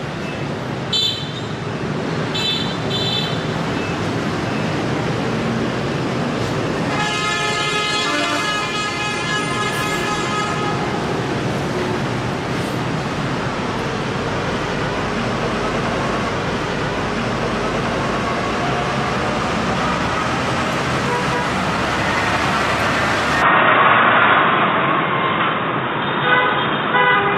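At 23.42 s the sound abruptly turns dull and boxy and stays that way to the end, with no gap at the transition. Everything above roughly 3.8 kHz disappears, the level shifts by around 5 dB, and a faint new background noise appears, sitting well below the signal at about 45 dB down. This is likely the input switched to a poorer device, such as a narrower-band microphone or a headset's call profile.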